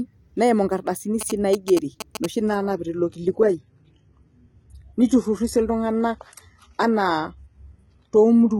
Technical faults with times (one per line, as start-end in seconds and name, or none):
1.21-2.26 GSM signalling bursts
2.49-8.60 adaptive stream at a lower bitrate